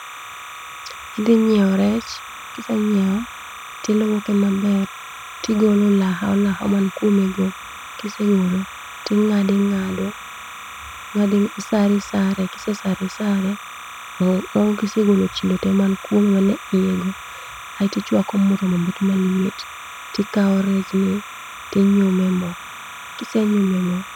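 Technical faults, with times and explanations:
Throughout: timecode bleed. A steady chirping warble sits around 15 dB below the speech, switching between tones near 1 and 2 kHz. This is linear timecode at 29.97 frames per second leaking from an adjacent track or cable, its square-wave biphase code alternating between those two pitches.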